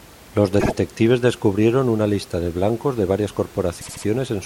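At 0.59 s, just before "descubrieron una lista de", the speech stutters. These are repeated frames: a 52 ms block plays twice more, which fits two compressed frames being sent again. The clip gains 104.5 ms. At 3.80 s it happens again, until 4.04 s. A 78 ms block repeats three extra times, adding 235 ms. Faint room noise sits about 25 dB below the speech.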